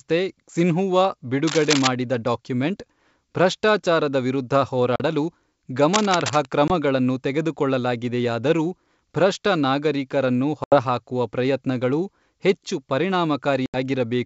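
From 1.47 to 1.88 s, just before "ಡಾಕ್ಯುಮೆಂಟ್ ಭ್ರಷ್ಟಾಚಾರದ ವಿರುದ್ಧ", cable scratch noise appears, likely from a worn cable or connector being moved so that its contact resistance jumps around rapidly. The result is a dense, ragged burst of scratching roughly as loud as the speech. A second burst, from 5.93 to 6.45 s, sits a little below the speech level and has the same rustling texture.

The call runs over G.722 wideband coding at 64 kbit/s, and it suffers packet loss on an ADPCM call. Each time, missing audio was replaced with silence, and the receiving decoder's adaptive predictor and step size drifted out of step with the sender's. The first gap comes at 4.96 s, right after "ಡಾಕ್ಯುಮೆಂಟ್ ಭ್ರಷ್ಟಾಚಾರದ ವಿರುದ್ಧ", and lasts 40 ms, which fits about two lost packets. A 20 ms gap follows at 6.68 s, just before "ತೆಗೆದುಕೊಳ್ಳಲಾಗಿದೆಯಾದರೂ ಭ್ರಷ್ಟ ನಾಗರಿಕರನ್ನು". Longer 80 ms holes occur at 10.64 and 13.66 s. 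Each is a hard-edged dropout, after which the speech returns slightly distorted before it settles.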